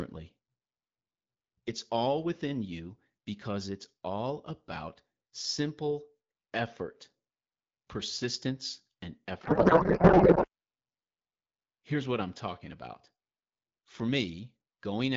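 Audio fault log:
9.43–10.47 s, codec payload misread: right after "persistence and", the receiver unpacks the AMR wideband (HD Voice) frames with the wrong bit layout, which fits octet-aligned packets being read as bandwidth-efficient ones. The decoder therefore takes its parameters from the wrong bit positions. For about a second the speech turns into garbled noise and warble that barely tracks it, until both ends agree on the packing again and the clear HD Voice sound returns.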